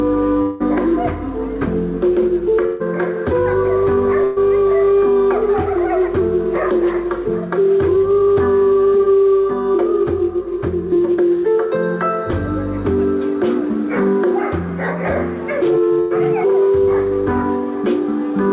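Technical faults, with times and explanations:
0.42 to 0.62 s, long network dropout: about 0.2 s of audio never arrives, and the last sound is carried on as a buzz or hiss that fades away rather than cutting to silence, after which the sound picks up further along with that stretch gone. A likely cause is a break in the incoming packet stream long enough that the receiver had to invent the missing part by extending what it last heard.
2.66 s, 4.24 s and 16.00 s, burst of packet loss: three brief holes of about 140 ms, 120 ms and 100 ms, each heard as the preceding sound frozen into a short held buzz or fading hiss before the audio jumps ahead with the middle missing. A few consecutive packets were lost or arrived too late to play, so the receiver stretched the last good sound and turned it down across the gap.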